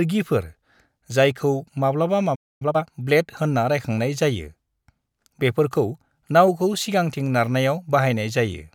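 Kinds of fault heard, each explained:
Playback stall: The speech stops dead mid-flow from 2.35 to 2.62 s, about a quarter-second of silence, likely because the player ran short of data or its thread was blocked. The audio waits, then carries on.
Time-compressed catch-up: From 2.62 to 2.86 s the player clears its backlog by splicing out small pieces, so the speech runs at double speed. The pitch stays normal, which separates it from a plain speed-up that would raise pitch.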